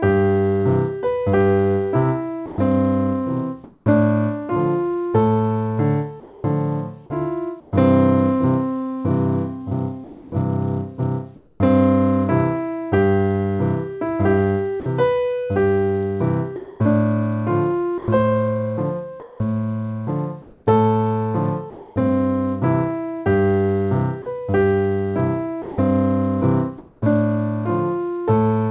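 At 2.46 s the sound is dropped by the voice detector for 120 ms, up to 2.58 s. The sender likely judged that stretch to be background and stopped transmitting, so the sound gives way to steady noise. On a waveform the envelope collapses into a flat noise band, and a spectrogram shows the structured energy replaced by an even wash.

Comfort noise then stands in place of the background within the stretch from 2.46 to 3.86 s (340 ms replaced), within 6.2 to 7.72 s (360 ms) and within 10.04 to 11.6 s (520 ms). During these pauses the receiver fills with synthetic noise shaped roughly like the real background, heard as a smoother hiss of different tone or level. On a spectrogram these pauses appear as smooth, uniform patches that lack the fine texture of the surrounding background.

From 14.8 to 21.96 s the sound is chopped by the voice detector, with 1100 ms replaced in total, and from 24.22 to 27.02 s with 440 ms replaced. 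The detector switched between sending and not sending more than once in each stretch, likely because it mistook parts of the sound for background. Comfort noise fills the holes. The waveform shows repeated gaps filled with flat noise, and the spectrogram shows alternating textured and smooth blocks.

Throughout, the call path, consistent with the G.711 A-law codec, leaves nothing above 4 kHz, a hard ceiling visible across the whole spectrogram.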